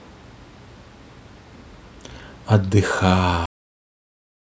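Speech clip with a cut-off end: at 3.46 s the audio stops mid-sound and drops straight to digital silence with no decay, because the final buffers never got written or played.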